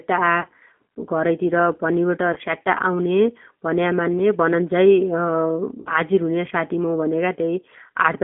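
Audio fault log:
Throughout: G.729 codec. The audio is held to a telephone band of roughly 200 Hz to 3.4 kHz, and its roughness fits an 8 kbit/s G.729A coder. This coder rebuilds each 10 ms frame from a vocal tract filter, a pitch predictor and a few pulses, so the speech comes out slightly grainy and synthetic. The damage is plainly audible across the whole clip. That texture sets it apart from simple low-pass filtering, which would dull the sound without adding the coarse, pulse-built grit.
0.41–0.46 s, 2.33–2.38 s and 5.80–5.91 s: VoIP packet loss concealed by the speech codec. About 30 ms, 30 ms and 60 ms of signal go missing, which points to one, one and two lost packets. Each time the decoder extends the last pitch and filter with falling gain, so the speech smears into a stretched sound that fades. The speech then stays weak briefly after packets resume. Unlike a dropout, there is no silence or click, only this synthetic stretch that tails off.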